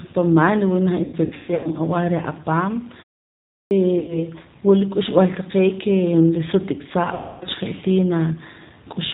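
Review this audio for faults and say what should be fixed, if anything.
The whole clip runs through the G.729 codec, and the damage is plainly audible. At 8 kbit/s the speech is rebuilt from a vocal tract filter, a pitch predictor and a handful of pulses per frame, so nothing above 4 kHz survives. The result is understandable but rough and a bit synthetic. To prevent it, negotiate a wideband codec such as G.722 or Opus if the endpoints support it.

The VoIP packet loss concealed by the speech codec strikes three times. The heaviest stretch runs from 1.04 to 1.69 s, where about 390 ms of audio goes missing in patches across roughly 600 ms, with the longest gap around 150 ms. Shorter hits come at 3.99 to 4.22 s (about 90 ms) and 7.14 to 7.46 s (about 270 ms). In each case the decoder keeps extrapolating from its last pitch and filter while turning the gain down, so the sound smears into a fading buzz or coloured noise. 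It then takes a moment to recover once packets arrive again. Fix the network path, or add jitter buffering and FEC, to keep packets from getting lost.

There's also a clipped start after a pause at 3.67 s. After about 0.72 s of silence, roughly 40 ms at the onset gets swallowed, so the sound jumps in abruptly without its first part. That points to the output device dozing off during the gap and not waking fast enough. Keeping the output stream open through silences would stop the clipping.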